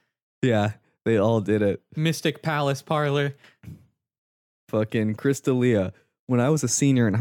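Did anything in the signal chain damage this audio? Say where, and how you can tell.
No, nothing in this speech recording stood out on listening as damage from any stage of the signal chain.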